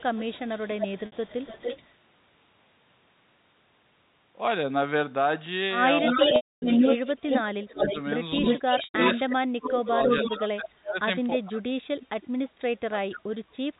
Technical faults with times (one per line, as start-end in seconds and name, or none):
0.00-1.93 echo leak
1.06-1.12 packet loss with pitch repetition
6.02-7.07 speech suppressed in double talk
6.06-9.17 echo leak
6.36-6.62 packet loss with pitch repetition
7.65-11.70 speech suppressed in double talk
8.84-8.94 packet loss with pitch repetition
9.87-10.37 echo leak
12.02-12.50 echo leak
12.90-13.75 speech suppressed in double talk